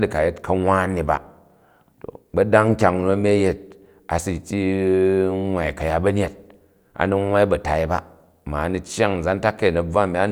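Nothing in the speech stood out as a problem on listening.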